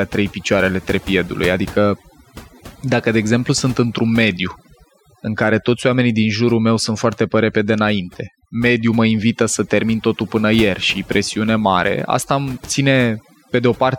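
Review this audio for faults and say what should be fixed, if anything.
Overdone noise removal runs through the whole speech clip: the noise reduction was set too aggressively, so frequency bands close to its noise estimate are pulled down or switched off, along with the softer parts of the voice. The background drops and breaks up into twinkling, warbling specks. Lower the reduction amount or threshold and check the result by ear so that only the true noise floor is attenuated.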